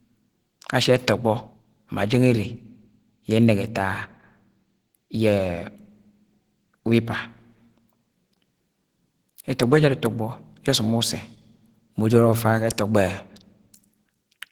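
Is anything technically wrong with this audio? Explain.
Yes. Plainly audible Opus compression damage runs through the whole speech clip. The sound fits the codec's hybrid mode, likely at a bitrate around 16 kbps. In that mode a speech-oriented layer codes the lower band and a transform layer covers the top. At this budget too few bits reach fine detail, so the upper band is filled with noise rather than real structure. The result is a hoarse, grainy texture, even though content still extends up to 20.4 kHz.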